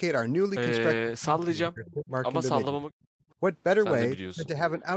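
From 1.03 to 2.13 s the echo canceller likely could not tell the near talker from loudspeaker echo while both sides spoke, so it turned everything down. This is speech suppressed in double talk: the speech sinks by as much as about 35 dB for roughly a second of that span.

Inside that stretch, at 1.86 to 1.94 s, there is an echo leak, likely from one side's canceller failing to remove all of what its microphone picked up from its loudspeaker. A faint copy of the speech, delayed by 397 ms and about 25 dB below the direct speech, comes back as a brief scrap.

The same double-talk suppression likely returns at 2.65 to 2.83 s, more mildly, with the speech dipping by about 15 dB for around 0.2 s.

A second, quieter echo leak at 2.90 to 3.05 s, likely the same incomplete cancellation, carries the same 397 ms delay and sits about 35 dB under the speech, so it is only a faint trace.

At 3.12 to 3.30 s the background is gated by the echo canceller. 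The canceller clamped the microphone hard while the loudspeaker played, and the room sound drops by up to about 39 dB for around 0.2 s before returning when the canceller releases.

From 4.34 to 4.87 s speech is again likely suppressed in double talk, falling by about 20 dB and losing roughly 0.4 s of level. Throughout, the call path's Opus coding keeps nothing above 8 kHz.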